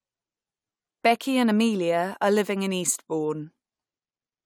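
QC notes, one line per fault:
Nothing stood out on listening to this speech clip.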